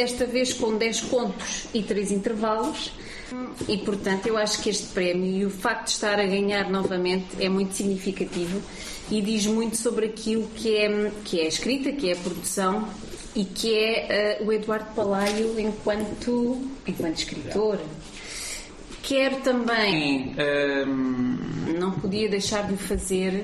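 From 19.92 s to 21.67 s there is a section at the wrong speed. It plays at about 0.867 times its proper rate, so it drags and drops roughly three semitones lower, then snaps back. This is likely a clock mismatch in editing or playback. On a spectrogram the harmonic bands step down and stretch sideways for that span. The waveform's cycles and envelope look visibly elongated against the surrounding audio.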